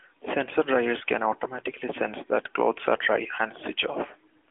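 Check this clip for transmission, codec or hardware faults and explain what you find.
No faults found; the narrowband mobile-codec character, with nothing above 3.6 kHz, is that path working normally.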